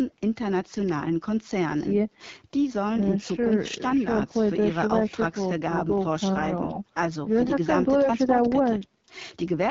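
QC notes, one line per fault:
Throughout: AMR wideband (HD Voice) codec damage at what sounds like the 8.85 kbit/s rate, one of the two lowest. The speech comes out rough and raspy because the pulse-driven vocal tract model has too few bits. A spectrogram shows coarse, smeared harmonics below 6.4 kHz, shaped noise-like energy from 6.4 to 7 kHz, and nothing above.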